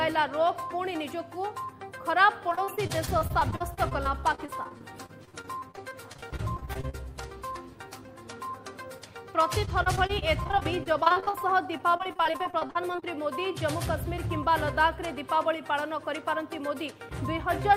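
From 2.49 to 6.95 s, and again from 9.65 to 13.04 s, the sound turns choppy, with small pieces dropping out. This is repeated packet loss (robotic sound). Dozens of short holes, none longer than about 40 ms, were patched by stretching the preceding sound forward. Because one gap follows another so quickly, roughly a fifth of each stretch is filled-in rather than real audio, which creates that choppy texture.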